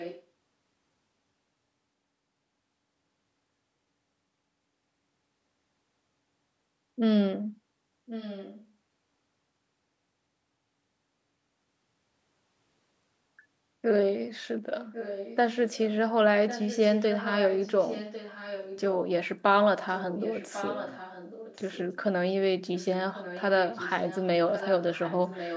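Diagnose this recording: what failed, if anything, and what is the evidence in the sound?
Echo leak at the call-processing stage: a fainter copy of the speech arrives 1.1 s late, roughly 10 to 15 dB down, at 0 to 0.24, 8.06 to 8.66, 14.92 to 15.87, 16.47 to 18.95, 19.94 to 22.03, and 22.76 s to the end. This is likely far-end loudspeaker pickup that the echo canceller failed to remove. The spectrogram shows weaker, ghosted harmonic traces repeating the speech in those spans.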